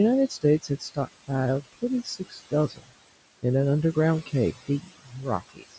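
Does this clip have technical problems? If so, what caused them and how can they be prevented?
Yes. There are noise suppressor artifacts throughout. The suppressor pulls the room noise down by about 20 dB between phrases and lets it back up under the speech, so the background pumps. A gentler suppression setting would keep that steadier.

There is also speech cut by the noise suppressor at 0.28–0.44 s, 0.62–1.08 s, 2.04–2.53 s, 2.69–2.91 s and 4.68 s to the end. In each stretch, quiet speech was mistaken for noise and dipped by about 16 to 20 dB, swallowing some soft sounds. Less aggressive suppression or a better mic-to-noise ratio would prevent it.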